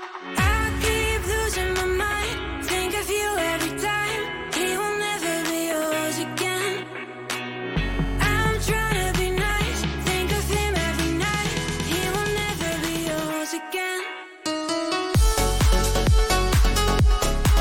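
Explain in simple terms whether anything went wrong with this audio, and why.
A nearby 2G phone's radio pulses leaked into the audio circuit, causing GSM phone buzz: a harsh, steady rasp from 7.77 to 8.77 seconds.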